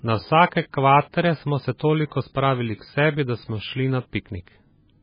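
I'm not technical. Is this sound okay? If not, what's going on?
No. Throughout, the speech sounds dull and watery, with a swirly, underwater quality and nothing bright above about 5 kHz. That is likely heavy MP3 compression: the encoder, short of data, cut the treble and dropped fainter details that flicker in and out.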